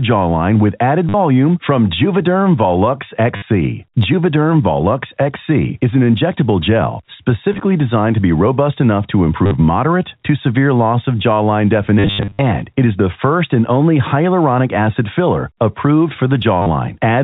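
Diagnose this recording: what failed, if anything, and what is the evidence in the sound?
Network stage: packet loss with last packet repeated. Robotic stutters at 1.09, 3.36, 9.46, 11.99–12.39 (worst) and 16.62 s, and small blips at 7.53 (after "is an injectable gel"). The receiver replays the previous packet, so the runs buzz near 100 Hz, which fits 10 ms packets.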